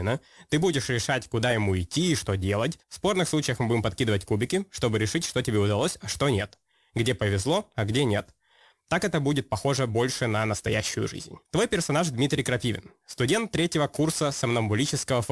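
Speech throughout shows aliasing. Sibilants sound gritty and metallic because content above 12 kHz has folded back to unrelated pitches, which fits a drop to 24 kHz without filtering. The folded energy sits roughly 20 dB down and runs hard to the band edge, unlike a clean low-pass roll-off.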